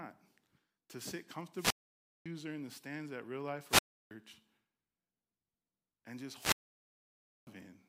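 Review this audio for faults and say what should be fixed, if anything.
You've got wireless microphone squelch dropouts at 1.53–2.26 s, 3.67–4.11 s and 6.31–7.49 s. Each time the RF signal fades, hiss swells, and the receiver's squelch mutes the speech for 555 ms, 323 ms and 950 ms. Shorten the transmitter-to-receiver distance, keep line of sight, and use diversity receivers.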